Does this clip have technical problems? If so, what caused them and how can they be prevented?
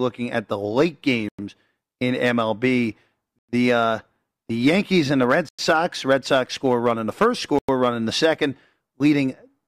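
Yes: the speech drops into 100 ms holes at 1.29, 3.39, 5.49 and 7.59 s, a gap between chunks that recurs after every 2 s chunk as silence is inserted at each chunk join. Prevent it by stripping codec padding and scheduling each chunk to start exactly where the previous one ends.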